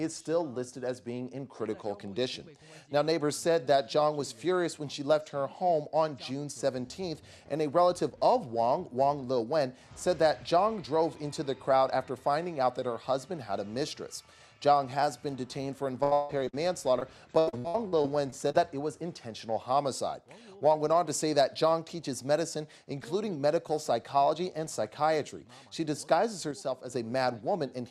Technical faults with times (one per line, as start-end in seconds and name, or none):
8.10-8.17 one channel drops out
16.03-16.55 repeated packet loss (robotic sound)
16.99-17.03 short concealed packet loss
17.39-18.56 repeated packet loss (robotic sound)
26.51-26.90 one channel drops out